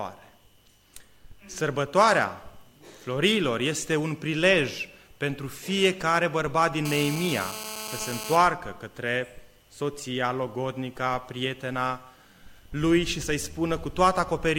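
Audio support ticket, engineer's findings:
GSM phone buzz, 6.85 to 8.37 s. Hard raspy buzz at about 217 Hz, lots of harmonics, steady, roughly 10 dB under the signal. Nearby 2G handset on a call, its TDMA bursts rectified by the audio input stage. Move the phone away.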